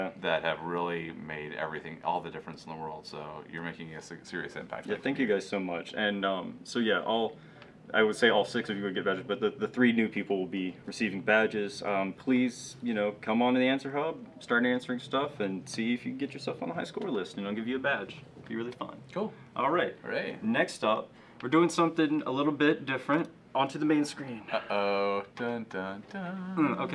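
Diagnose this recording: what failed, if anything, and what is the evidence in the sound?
Nothing stood out on listening that would point to a failure at any stage of the recording or playback chain.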